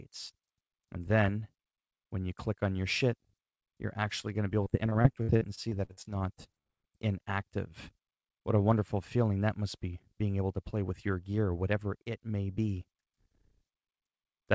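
From 4.64 s to 6.66 s the sound breaks up with repeated packet loss, producing a choppy texture with pieces missing. Across those two seconds the stream drops out again and again, pointing to around sixteen separate losses, the longest about 57 ms. Each hole is bridged by stretching the preceding sound, so about a fifth of the stretch is synthetic fill. The call path's band limit, with nothing above 8 kHz, fits G.722.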